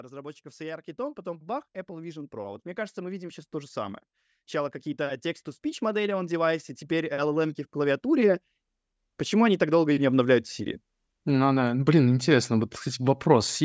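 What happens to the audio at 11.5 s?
At 11.5 s the automatic gain rising is just finishing. It began at 9.29 s and settles at 11.55 s, right before "да блин интересно". The call's gain control judged the input too quiet and raised its gain slowly, by about 4 dB in total. The speech and the background noise swell together over these two seconds. The level creeps up steadily rather than jumping, so it sounds like a slow lift in loudness.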